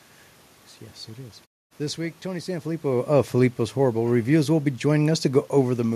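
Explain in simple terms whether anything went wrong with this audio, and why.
Nothing went wrong with this speech recording: the background noise of the room is simply part of where it was recorded, the voice shifts in loudness around two and a half seconds in because the talker moved relative to the microphone, and the background goes quiet during pauses before the next sound comes in, losing only very quiet sound.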